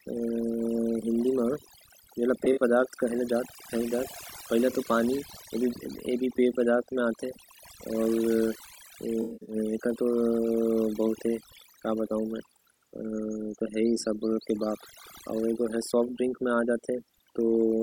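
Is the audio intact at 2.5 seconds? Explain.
No. AAC frame loss with concealment hits between 2.44 and 2.62 s. About 85 ms of audio goes missing, scattered across a 171 ms stretch, which fits several lost frames, with no single gap longer than around 40 ms. For each gap the decoder rebuilds the sound from the last good spectrum with randomised phase or interpolated energy. Because the gaps are short, the result is a brief smeared, noisy, phasey patch rather than a fade into silence.

Overdone noise removal also affects this moment, as it does the whole clip. The noise reduction was set so aggressively that any frequency band close to its noise estimate is pulled far down or removed entirely, taking the quieter parts of the speech with it. Around 2.5 s the background is pulled down and broken up into twinkling specks.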